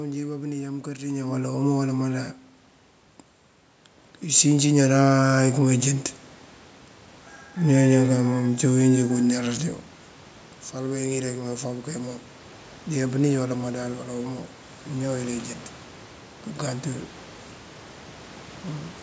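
From 4.22 to 5.91 s, automatic gain rising: the gain control treats the input as too quiet and ramps it up about 9 dB, lifting voice and room noise together.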